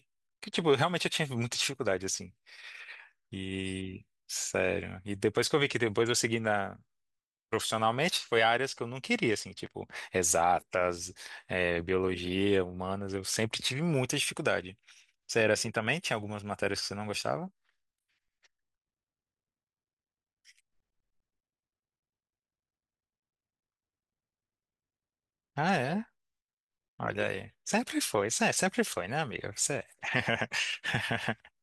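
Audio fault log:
No fault is logged for this speech audio.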